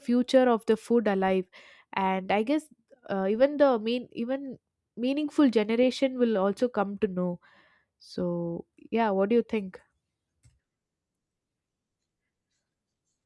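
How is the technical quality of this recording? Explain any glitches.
The technical quality of this recording is good, and there are no glitches to explain.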